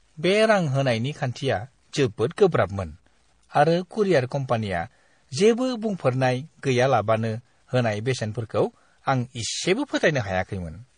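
From start to finish, the speech carries a grainy, signal-following distortion typical of low bit depth without dither. The error sits roughly 45 dB below the signal and rides with it, so quieter syllables and decays turn rough and sputtery instead of fading smoothly. The likely cause is truncation to a coarse word length with no dither to decorrelate the rounding error, and the grain points to about 10 bits.

Also present throughout are the layered artefacts of transcoding between lossy codecs. Nothing is heard above 9.8 kHz, giving the speech a dull top end, and the artefacts of one codec are heard together with those of another. This mix is likely the result of a low-bitrate AAC encode later re-encoded to MP3, with the second encoder spending its few bits on the first one's artefacts. The sound fits rates of around 32 and 48 kbit/s.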